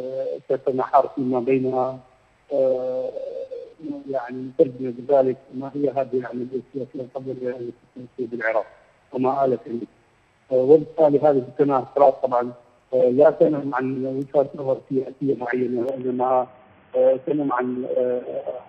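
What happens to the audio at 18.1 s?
At 18.1 s the audio sits inside a stretch, from 15.89 s to the end, where the input has most likely switched to a poorer device. The replacement path passes nothing above 3.4 kHz, so the sound turns dull and boxy. The change comes with no silence at the switch, along with a modest level shift and a faint new background noise lying well below the signal.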